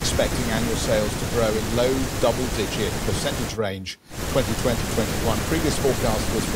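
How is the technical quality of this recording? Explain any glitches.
No glitches turn up anywhere in this recording, so there's nothing about its technical quality that needs explaining.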